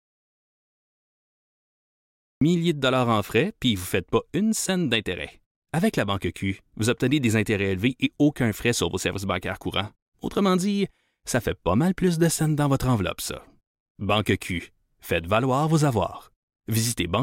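The speech clip opens in silence, with no room tone at all, until about 2.41 s, when the sound enters mid-flow at "de dollars en frais". This audio dropout to silence was already under way at the start, most likely from lost input while the recorder kept writing silence.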